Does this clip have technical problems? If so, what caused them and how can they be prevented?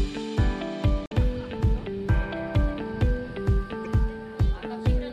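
Yes. Two short glitches break the audio from 1.03 to 1.13 s and again, more briefly, from 3.84 to 3.87 s. Both come from damaged data in a compressed stream. Bytes in those stretches of the encoded file were corrupted, so the decoder misread the affected frames, lost its place in the bitstream, and searched for the next valid frame header. To prevent it, transfer and store compressed files with checksums or error-checked protocols and keep metadata out of the audio frames.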